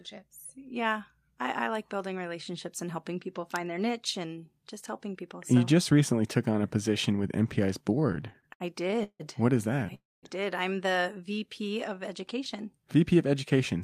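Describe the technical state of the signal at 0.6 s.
At 0.6 s the speech signal is intact, with no audible technical fault at that moment.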